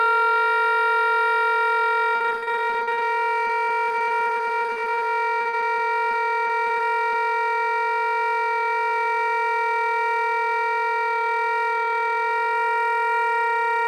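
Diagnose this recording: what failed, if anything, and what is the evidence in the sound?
Network stage: repeated packet loss (robotic sound) in three bursts, at 2.15–3.03 s, 3.47–5.03 s and 5.41–7.16 s, densest first. Concealment repeats the last sound over each gap (up to 47 ms), giving choppy audio: smeared, frozen spectrogram frames and a stuttering waveform.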